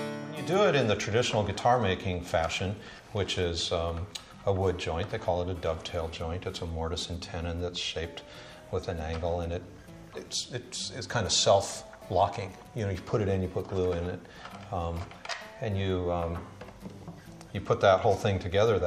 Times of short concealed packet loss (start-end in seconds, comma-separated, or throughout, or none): none